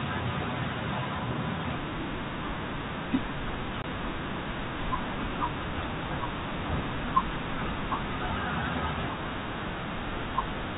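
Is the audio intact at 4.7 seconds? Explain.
Yes, the speech at 4.7 seconds is intact, with no fault there, just the narrow telephone-band sound of G.711 coding carrying it as normal.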